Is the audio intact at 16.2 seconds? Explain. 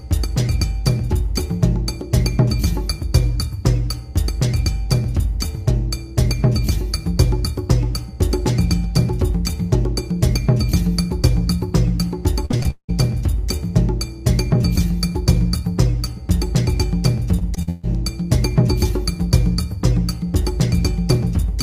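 Yes, the audio is intact at 16.2 seconds, with no fault audible at that moment.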